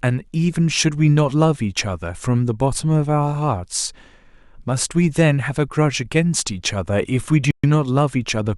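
Right near the end, from about 7.51 to 7.64 s, the speech drops to dead silence for roughly 128 ms and then carries on. That's likely a Bluetooth stall, where interference delayed packets long enough for the headphone buffer to empty before resends arrived.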